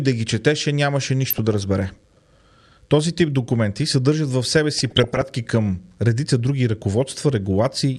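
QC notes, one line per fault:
1.25–1.64 s, DAB burbling, after "да ги четеше нямаше": short noise blips over the speech. Bit errors at a rate of a few tenths of a percent got past error correction, so wrong samples put short blips of noise in single sub-bands, which fits corruption across roughly 18 MP2 frames.
4.78–5.28 s, DAB burbling, between "документи съдържат в себе" and "към редица други": a longer, denser burst from a higher error rate, around half a percent, spread over about 21 frames.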